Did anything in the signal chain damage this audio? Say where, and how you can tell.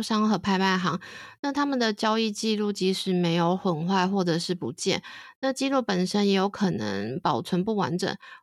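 No, nothing in this speech recording stood out as damage from any stage of the signal chain on listening.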